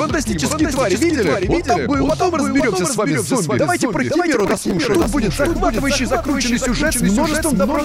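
The whole recording carries a doubled audio track: a full-band copy about half a second behind and a few dB quieter, likely from a second, slower capture path, distinguishable from echo by its lack of decay or room colour. From 4.34 to 5.06 s, processor overload crackle tears through the sound as a run of very short buffers misses its deadlines, each replaced by a hard-edged scrap of old audio. That repeated, gritty texture sets it apart from clean dropouts or clipping.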